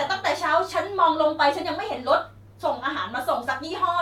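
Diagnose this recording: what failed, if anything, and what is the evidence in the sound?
Nothing failed: no stage between the microphone and playback leaves an audible fault anywhere in this speech.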